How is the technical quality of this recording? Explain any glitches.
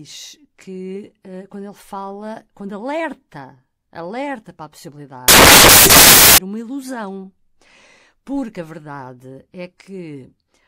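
There's one real problem, and it's hard to miss. From about 5.28 to 6.38 s, just over a second, the speech gives way to a blast of loud, harsh noise, and then it comes back right before "uma ilusão". That's samples built from the wrong bytes: the decoder is assembling each sample with its bytes misaligned or swapped, so the jittery low-order bits end up as the loudest part of the value. You hear loud, harsh broadband hiss.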